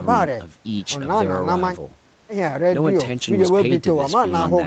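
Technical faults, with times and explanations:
3.65 s, lost packet rebuilt from error correction: One 20 ms stretch of speech briefly turns rougher and noisier. There is no gap. A single packet went missing, but the next packet carried a low-bitrate spare copy of it. This is Opus in-band forward error correction. The decoder played that spare copy in place of the lost frame. The copy holds less detail, so the frame sounds coarser. The call's band-limited sound, with nothing above 8 kHz, stays the same across it.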